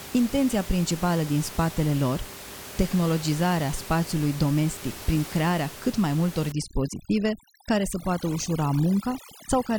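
From about 6.52 s through to the end, overdone noise removal kicks in: a noise reducer set far too hard is pulling whole frequency bands down whenever they sit near its noise estimate, so the room noise, about 15 dB under the speech, drops and breaks up into twinkly specks, and quiet parts of the speech are pulled down with it.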